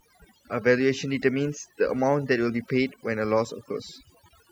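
A speech recording with overdone noise removal throughout. Aggressive noise reduction gated out bands near the noise floor. Pauses drop to twinkling near-silence. Quiet parts of the voice are cut away along with the noise.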